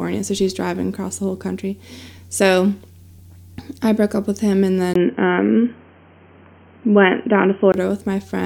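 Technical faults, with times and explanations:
4.94–7.74 s, input switched to a poorer device: after "up with him and", a 20 ms gap, then boxy sound with nothing above 3.2 kHz, likely from a narrower-band microphone.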